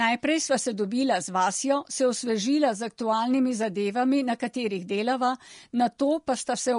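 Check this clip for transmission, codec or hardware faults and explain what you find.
One codec fault runs through the whole speech clip: Vorbis compression, plainly audible from start to finish. The top end is cut lower than normal, and the remaining treble has a hissy, grainy texture. Tones sound roughened and consonant onsets are softened. The likely cause is a low-quality Vorbis encode, with the damage consistent with a rate around 36 kbps. The encoder quantised the upper residue so coarsely that fine detail was replaced by noise of similar energy. Steady broadband hiss would sit evenly under pauses too. This grain follows the speech itself, which points to the codec.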